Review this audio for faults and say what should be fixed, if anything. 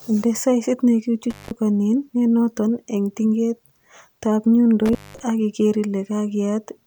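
The speech drops out twice from intermittent contact. At 1.30 to 1.51 s the line opens for about 171 ms. At 4.86 to 5.23 s it opens for about 197 ms, after "nenoton en tingetab" and before "ak iker". A loose cable or plug breaks the signal path. Crackle marks each edge, with faint hiss in the gap. Reseat or replace the cable and secure the plugs before recording.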